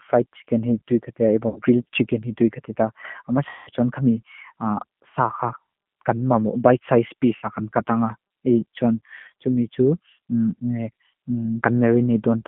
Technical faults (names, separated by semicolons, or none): G.729 codec; VoIP packet loss concealed by the speech codec